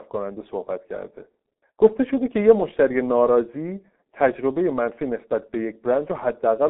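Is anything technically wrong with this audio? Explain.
Yes. Throughout the speech the sound is muffled and hoarse, with consonants smeared together and no energy above about 3.8 kHz. This is the G.723.1 codec damaging the signal heavily. The audio has passed through a narrow telephone band of roughly 200 Hz to 3.6 kHz, and a very low bitrate, consistent with about 6 kbit/s, forces the codec to model speech coarsely in long frames. That loses fine detail and softens every sharp transition.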